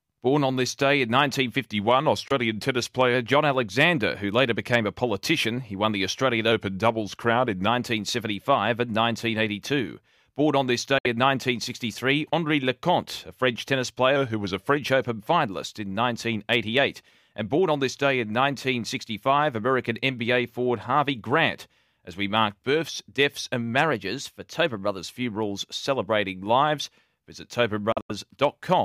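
Speech here, with two kinds of trouble. Four stretches shift speed and pitch together, which is likely a drift correction step. From 1.71 to 3.15 s, 6.52 to 7.68 s and 14.16 to 14.77 s the playback runs about 6% slow and drops roughly a semitone (113 cents). From 23.91 to 24.98 s, right after "mark births deaths and", it goes about 6% fast and about 106 cents sharp. Then there are short holes where the speech picks up further along, as if it kept playing underneath. That points to a likely Bluetooth dropout. There's a 21 ms gap at 2.28 s, inside the first slowed stretch, and a 64 ms gap at 10.98 s just after "on this". From 27.92 to 28.11 s there's a cluster of gaps totalling 128 ms across about 170 ms, with the longest lasting 85 ms.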